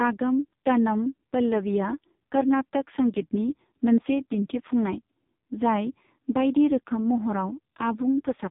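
Throughout, the speech sounds buzzy, muffled and synthetic, with nothing above 3.8 kHz. This is heavy AMR narrowband mobile codec damage, consistent with a very low bitrate near 5 kbps.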